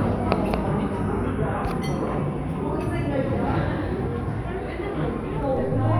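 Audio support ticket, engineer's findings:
DC step at 5.57 s, holding to the end of the clip. Low thump as the zero line jumps by about -36 dBFS, then the offset stays put while the sounds continue unchanged. Probable component: converter recalibration or an offset input switched into the path.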